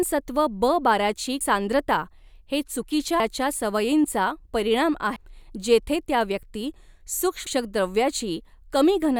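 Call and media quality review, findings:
Damaged data in the compressed stream, codec/decoder path: corrupt frames at 1.41, 3.20, 5.16, 7.47 s. Decoder misreads them, loses sync, hunts the next frame header. Short chirp or blip in the speech, before "सांद्रता हे चुकीच्या", "सवयींचा परिणाम", and "जेथे त्या व्यक्ती".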